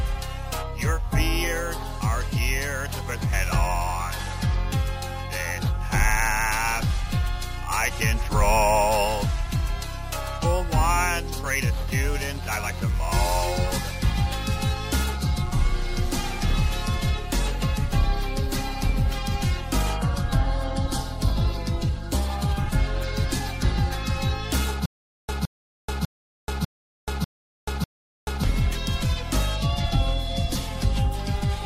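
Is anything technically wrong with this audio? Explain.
Yes. Stutter with silent gaps, 24.86 to 28.44 s: playback likely stalled, and each retry replayed the last fragment, then ran empty. A 165 ms burst recurs six times, every 0.6 s, with 432 ms of digital silence between, and the intended audio there is lost.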